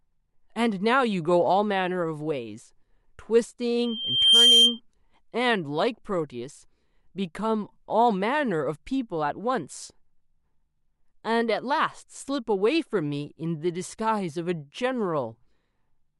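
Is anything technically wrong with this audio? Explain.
Yes. From 3.78 to 4.80 s a piercing tone at 3.2 kHz swells over about half a second to roughly 10 dB above the speech. This is loudspeaker feedback squeal: the microphone picked up its own loudspeaker, and at that frequency the loop gain exceeded one, so the tone kept reinforcing itself.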